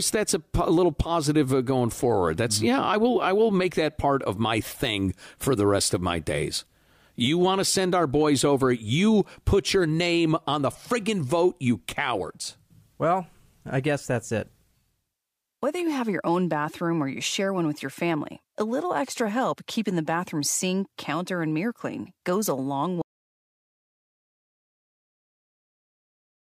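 The input feed was most likely lost at 23.02 s, through a disconnected device, failed link or mute, while the recorder kept writing silence. This audio dropout to silence cuts the speech off mid-flow and leaves dead silence, with no room tone, through to the end.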